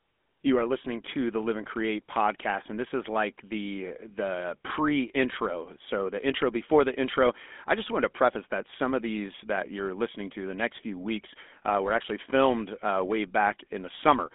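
Speech carried through the GSM full-rate codec for its whole length, with plainly audible damage throughout. The voice has a buzzy, gravelly roughness because the codec rebuilds it from a vocal-tract model driven by a coarse, regularly spaced pulse excitation, which fits a 13 kbps full-rate stream. The band runs from about 200 Hz to 3.5 kHz, but narrowness alone would only sound like a plain telephone line; the rasping buzz is what marks this codec.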